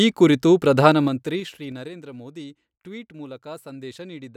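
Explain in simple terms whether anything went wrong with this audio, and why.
Something did go wrong: there's zipper noise from 0.84 to 1.95 s, right after "ಈ ಕುರಿತು" and ending before "ಮೋದಿ ಟ್ವೀಟ್". The speech gets turned down a lot, but in small jumps about seven times a second, and each jump ticks, so it sounds like a zip.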